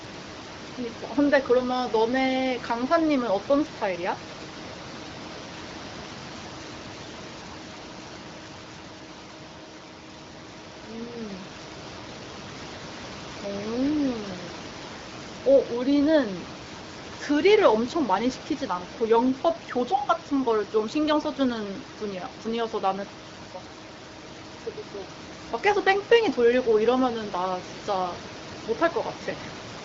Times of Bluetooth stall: none

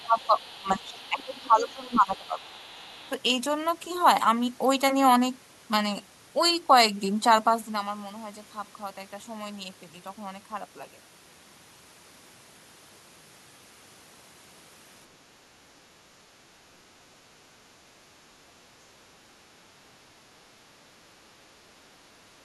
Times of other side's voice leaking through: 0.00-3.11

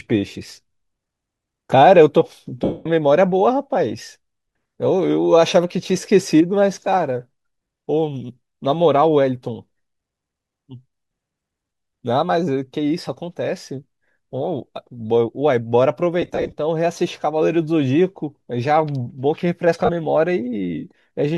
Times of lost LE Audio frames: 2.64-2.86, 16.22-16.52, 19.85-19.90

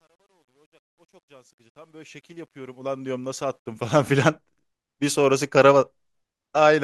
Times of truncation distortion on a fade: 0.00-4.10

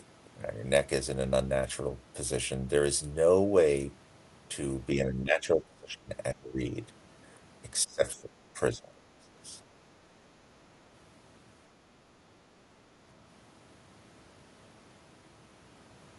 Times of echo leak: none

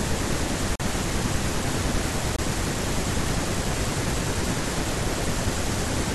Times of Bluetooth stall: 0.75-0.80, 2.36-2.39

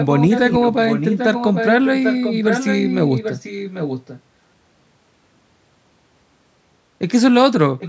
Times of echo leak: 0.00-4.21, 7.79-7.88

